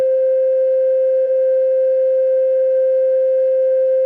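At 1.25 to 1.27 s the music suffers a skip ahead: roughly 0.7 s of audio is simply gone, and playback lands later in the piece with no silent fill in between. A stretch was discarded while later audio was already queued, as happens when a jitter buffer overflows, so the timeline jumps forward. Unlike a dropout, there is no gap or fade to hear, only an abrupt splice where the flow lurches ahead.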